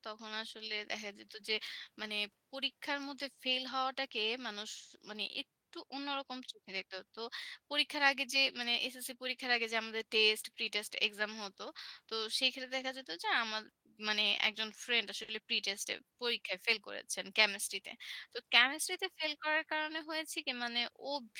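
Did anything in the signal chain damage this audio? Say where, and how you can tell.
Yes, in the network jitter buffer. At 15.23 s a sound is held about 50 ms too long before the speech resumes. This is a short stall from a late packet: the buffer ran empty, the receiver stretched the last sound, then continued from the same point, so nothing is lost.

From 17.29 to 18.44 s the speech runs at about 104% speed with unchanged pitch. This is a jitter buffer speed-up: with more audio queued than its target, the receiver repeatedly cut pitch-period-length pieces, removing roughly 50 ms in total.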